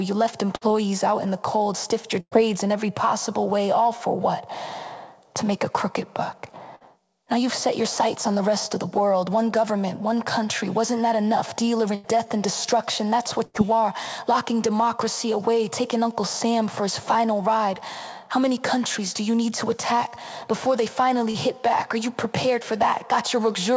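A run of packets went missing or arrived too late five times, each a burst of packet loss. The receiver extended the last sound and faded it before the audio jumped ahead past the lost span. At 0.56 s about 54 ms is filled and 60 ms skipped. At 2.20 s a 110 ms fill gives way to 60 ms of silence, with 120 ms lost. At 6.75 s there is a short 51 ms fill. The longer held, fading stretches at 11.95 s and 13.45 s each cover about 90 ms. At 21.31 s a short concealed packet loss of about 30 ms was patched by continuing the preceding sound and blending back, heard as a brief smear lasting roughly 37 ms. Throughout, the audio carries the band limit of the call path's G.722 coding at 64 kbps, with nothing above 8 kHz.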